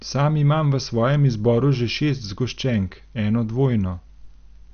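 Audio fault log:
throughout, MP2 compression: the speech was likely encoded with MPEG Layer II at a starved rate, consistent with about 48 kbps. Upper sub-bands are switched off, leaving nothing above 6.5 kHz, and the coarsely quantised remaining bands sound dull, gurgling and granular.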